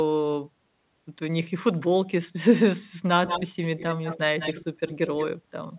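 Speech carries an echo leak from 3.26 to 4.19 s, 4.39 to 4.65 s and 4.87 to 5.25 s: a distinct copy trailing 186 ms behind, fading from about -5 to -15 dB, likely loudspeaker pickup the far end's canceller missed. Unlike room reverb, it repeats rather than smears, heard within narrowband audio cut off at 4 kHz.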